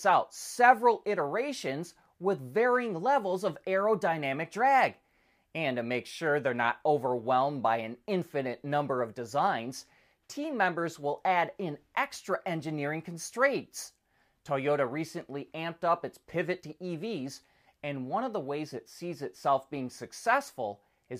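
No technical faults can be heard anywhere in it.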